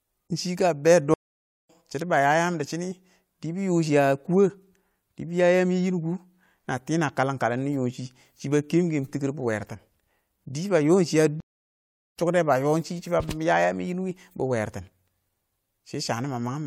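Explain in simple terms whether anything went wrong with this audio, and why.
Two stream reconnects occur, at 1.14 to 1.70 s and 11.40 to 12.16 s. Each time the connection dropped and the speech went silent, for about half a second and then three-quarters of a second. Playback then restarted further along, skipping roughly 0.3 s and 0.7 s of speech.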